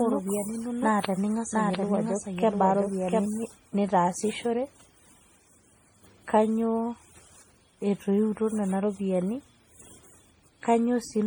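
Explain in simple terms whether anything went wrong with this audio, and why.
Two things went wrong. First, the recording was most likely saved in a compressed format and then converted into a second compressed format, which is called transcoding between lossy codecs. Each format throws away detail to save space. The second format then wasted effort preserving the first one's damage and added its own. So throughout all of the speech, two sets of smearing and roughness sit on top of each other.

Second, from the very beginning until 3.26 s there is a doubled audio track. A second copy of the same speech runs underneath, trailing about seven tenths of a second behind and somewhat quieter than the main sound. This is likely because the sound was picked up twice, once through a slower route. Unlike a real echo, the copy has no fading tail or room sound, and it stops abruptly at 3.26 s.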